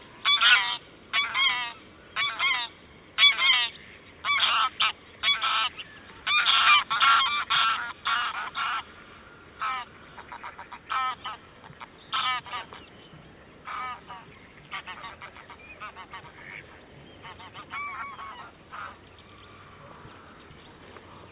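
No technical faults occur in this audio, so there is nothing to describe in time order.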